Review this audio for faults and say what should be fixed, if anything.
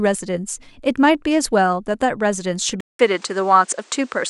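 At 2.81 s the speech goes silent for about 0.19 s, then returns duller until the end. Nothing is heard above 9.7 kHz. A faint new noise floor appears. The input likely switched to a poorer device. Lock the input device before recording.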